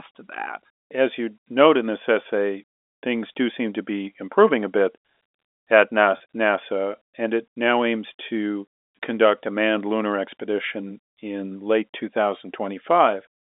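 At 6.17 s, about 30 ms of audio went missing in transit, which fits three 10 ms packets, and the receiver concealed it with packet loss with pitch repetition, looping the last pitch period until 6.20 s. The speech briefly holds on a slightly buzzy, sustained tone over the narrow telephone band.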